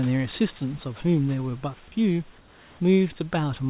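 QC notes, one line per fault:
2.38–2.8 s, comfort noise in place of the background: the room hiss turns flat, featureless and about 2 dB quieter, likely because discontinuous transmission swapped in synthetic noise during the pause.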